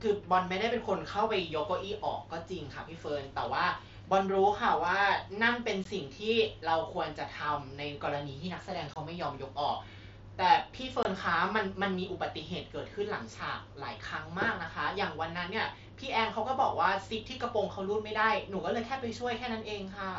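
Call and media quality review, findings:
Short dropouts in the speech at 5.84 s (15 ms), 8.94 to 8.96 s and 11.03 to 11.05 s (22.5 ms each). Unconcealed Bluetooth headset packet loss on the mSBC link. Lost voice frames are replaced by silence or an idle pattern with hard edges, matching two to three 7.5 ms frames.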